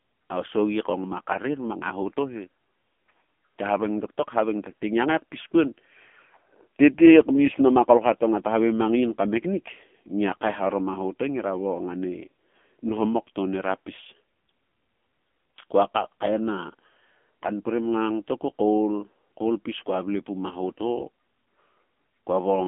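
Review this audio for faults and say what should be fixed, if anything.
AMR narrowband mobile codec damage runs throughout the clip. The speech has been squeezed into an 8 kHz, 20 ms frame vocal-tract model, leaving a telephone band of roughly 200 Hz to 3.4 kHz with nothing above 3.5 kHz. The heavy buzzy, synthetic texture fits a low mode near 6.7 kbps. To prevent it, capture or route the speech through a wideband path instead of a narrowband mobile call.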